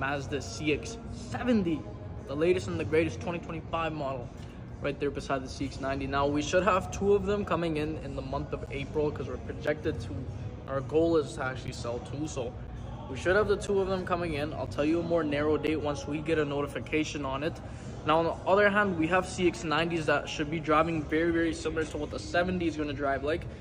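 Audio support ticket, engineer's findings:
Periodic USB or driver dropouts, 8.66 to 15.68 s. Regular ticks, one per second, about seven. Each is a roughly 10 ms hole of silence in the signal, pointing to a background task periodically stalling the USB bus or audio driver.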